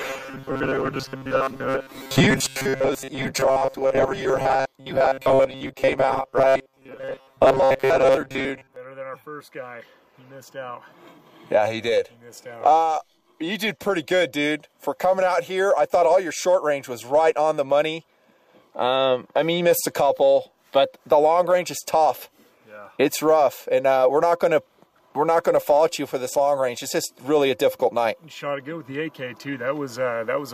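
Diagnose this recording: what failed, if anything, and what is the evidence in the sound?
From 0.01 to 8.76 s the sound is a rigid, metallic buzz locked at 134 Hz, the robotic sound from repeated short buffers, likely at the driver or buffer stage. Most of the audio appears replaced by loops of roughly 7.5 ms. Unlike codec warble, the pitch stays fixed regardless of content.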